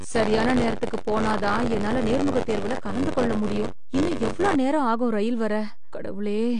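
Throughout, a DC offset holds the whole waveform off the zero line, so it sits lopsided in the waveform view and shows a steady band at 0 Hz on the spectrogram. The speech is also dull and smeared, with nothing above 9.8 kHz: a flat spectrogram ceiling, likely from AAC compression at a low rate, around 32 kbps. From 0.0 to 4.56 s, just before "நேரம் ஆகும் ரயில் வர", buffer tearing gives a robotic 93.8 Hz buzz, which fits a 512-sample buffer. A small slice of each period replays audio from tens of milliseconds earlier, leaving regular hard joins and vertical striping.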